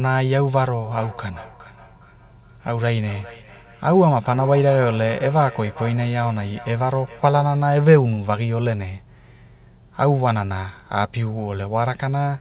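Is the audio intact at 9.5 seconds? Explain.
Yes, the speech at 9.5 seconds is intact, with nothing above about 4 kHz because it passed through a G.711 call codec, which is normal for that path rather than a fault.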